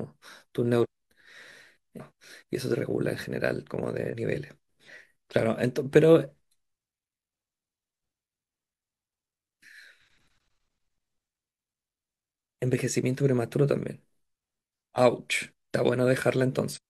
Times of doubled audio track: none

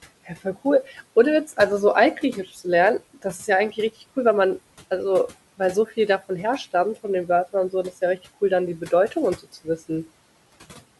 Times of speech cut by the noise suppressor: 9.38-9.67

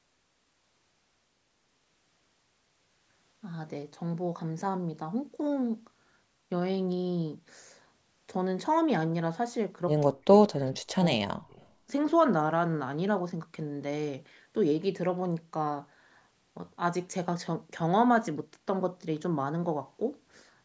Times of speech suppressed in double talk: 10.06-10.31, 11.08-11.62

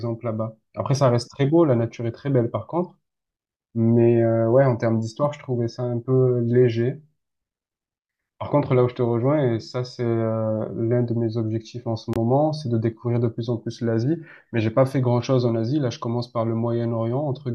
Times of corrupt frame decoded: 5.21-5.25

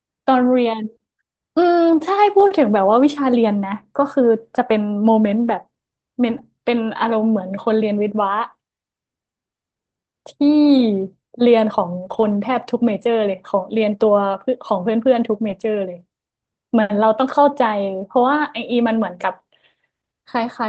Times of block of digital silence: none

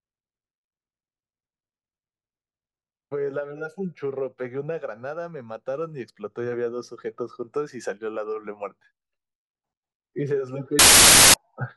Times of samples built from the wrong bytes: 10.79-11.34

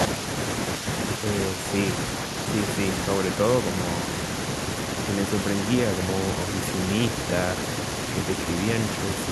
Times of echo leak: none

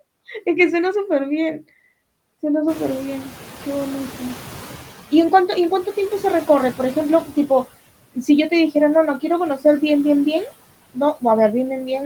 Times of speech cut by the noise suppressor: 8.14-8.29, 11.14-11.24

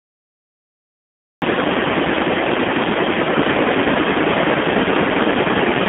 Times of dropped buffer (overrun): none

